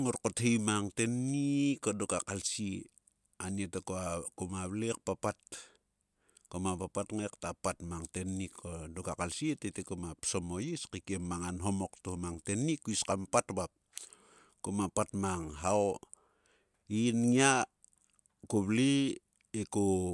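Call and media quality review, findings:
No audible faults found in this speech recording, no dropouts, distortion or timing problems to log against any component.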